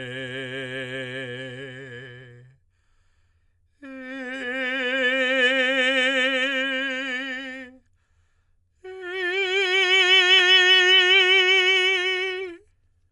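Music, dull throughout with nothing above 11.4 kHz and a rough, fluttering noise around tones, likely Dolby Digital compression at a low bitrate, consistent with about 64 kbps.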